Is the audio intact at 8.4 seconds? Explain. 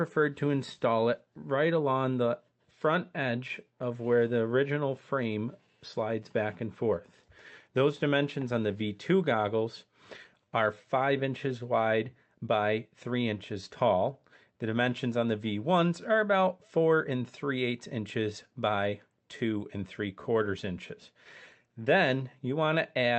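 No. From 0.14 to 23.09 s, clock drift between sender and receiver is in play: the sender's clock runs about 3% slow, so the jitter buffer keeps draining. The repeated timing corrections fill that gap by repeating tiny pieces, adding roughly 0.7 s in total and slowing playback to 97%. At 8.4 s this is heard, if at all, as slight hiccups or an unsteady tempo, not the silent gaps of packet loss.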